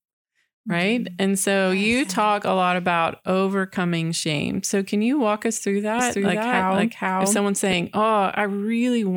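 From 5.99 to 7.73 s, just after "you walk us through", the speech is doubled. A second full-band copy runs about half a second behind, at roughly the same level as the original. It carries no decay or room colour, so it is not an echo. It starts and stops abruptly. This doubled audio track likely comes from the same signal being captured twice, once through a slower path.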